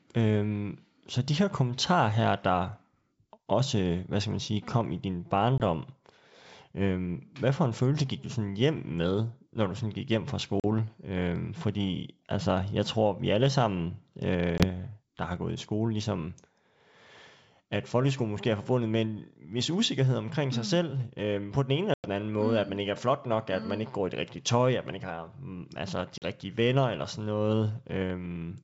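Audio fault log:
5.58–5.60 s, 10.60–10.65 s (after "sådan gik hjem fra"), 14.58–14.65 s (before "der har gået i"), 21.94–22.07 s (between "øh på den ene" and "anden måde mm at"), 26.18–26.24 s: packet loss on an ADPCM call. Hard-edged silent holes of about 20, 40, 20, 100 and 40 ms, roughly one to five packets each, cut into the wideband speech, whose sound fits G.722 at 64 kbit/s. The speech then returns slightly distorted, at times with a click or at the wrong level. This happens because the receiving decoder's adaptive predictor and step size have drifted from the sender's, and they take some tens of milliseconds to realign. A plain dropout would resume cleanly.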